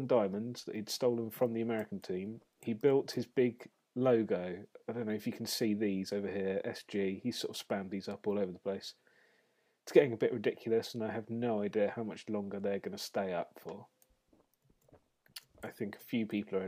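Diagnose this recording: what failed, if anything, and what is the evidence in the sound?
Nothing in this recording points to a failure at any stage, so there's no fault here to chase down.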